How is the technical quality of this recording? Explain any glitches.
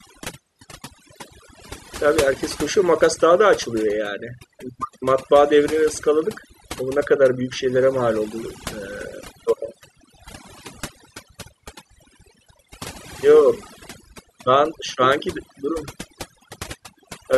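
The recording is marred by one fault lasting its full length. Throughout, the background is near-silent apart from twinkling specks. That is overdone noise removal: an aggressive noise reducer cut individual frequency bands sitting near its noise estimate, taking quieter parts of the voice with them.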